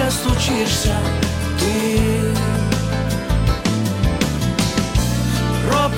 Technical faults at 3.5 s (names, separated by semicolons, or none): none